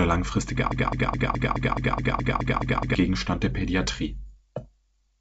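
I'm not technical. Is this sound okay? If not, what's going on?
No. From 0.72 to 2.95 s, a broken-record loop repeats one 0.21-second snippet eleven times. The stream likely stalled, and the real speech there is lost.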